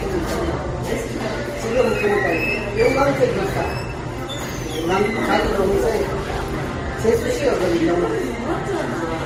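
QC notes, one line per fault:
Throughout: transcoding between lossy codecs. The audio stops sharply at about 15.8 kHz, and several kinds of codec damage are heard at once, each later encode adding its own artefacts on top of what recompression has compounded. Unlike a single low-bitrate encode, the artefacts are layered rather than of one character. This likely comes from a chain of roughly MP3, then Vorbis, then Opus at low bitrates, each encoder re-spending bits on the previous one's damage.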